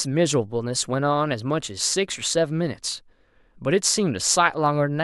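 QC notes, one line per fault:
No faults heard.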